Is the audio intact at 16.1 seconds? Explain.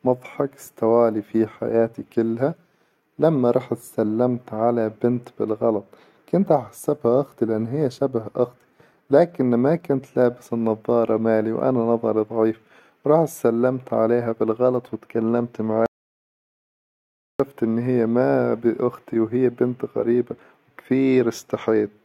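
No. An audio dropout to silence runs from 15.86 to 17.40 s, after "سلمت عليها بالغلط وتكلمت" and before "إن هي ما بأختي". The input was likely lost while recording continued, leaving 1.54 s of dead silence with no room tone.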